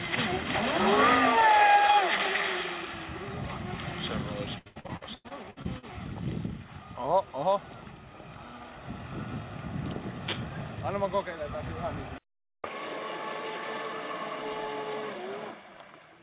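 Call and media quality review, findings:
Repeated packet loss (robotic sound), 4.58–5.85 s. Choppy. Ten gaps, longest 94 ms. About 40% of the span is concealed by extending prior audio in the jitter buffer.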